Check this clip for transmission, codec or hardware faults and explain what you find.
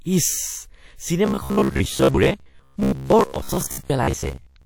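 Two faults are audible in the speech.

From 1.26 s to the end, at about 4.65 s, the audio takes on a robotic sound from repeated short buffers. A rigid, metallic buzz at 66.8 Hz sits over the speech. The likely cause is delayed audio, with the player repeating its last segment of about 15 ms to fill the gap, so roughly half of what is heard is repetition.

From 3.85 s to 3.90 s there is pre-echo. A hiss spreads over 46 ms ahead of a sharp onset, and the attack sounds smeared. Codec quantisation noise, sized for the loud attack, fills the whole transform block, including the quiet moment before it.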